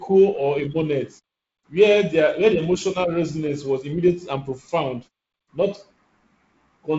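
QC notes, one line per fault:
No faults to note, so there is no line per fault.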